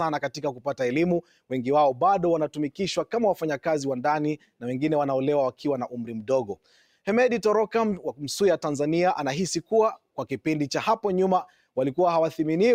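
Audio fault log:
throughout, noise suppressor applied to music or sounds: the level keeps breathing and thinning, with a swing of roughly 5 dB, as a suppressor built for speech mistakes sustained and ambient parts of the sound for noise and keeps pulling them down.
0.35–0.66 s, 1.22–1.52 s, 6.53–6.86 s, sound cut by the noise suppressor: the sound briefly sinks, by about 12 dB, 11 dB and 9 dB at the deepest, for a fifth of a second or less each time, where the suppressor judged that stretch to be noise.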